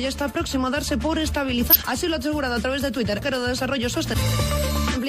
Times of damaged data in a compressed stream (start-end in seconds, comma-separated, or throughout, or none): 1.68-1.76, 4.12-4.17, 4.91-4.97